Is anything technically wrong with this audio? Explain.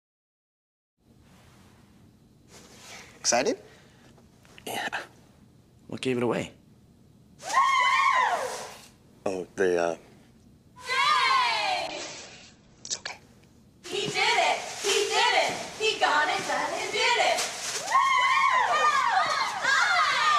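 Yes. There is a call bitrate drop from 11.88 to 13.19 s. The call's bandwidth estimate fell, so the encoder had far fewer bits to work with. Its coding turned coarse, and the top end was cut from about 20 kHz down to 8 kHz. The sound goes muffled and rough, with a watery texture, for about 1.25 s at its worst. That fits a fall from a rich stream to something near 10 kbps. Then it recovers.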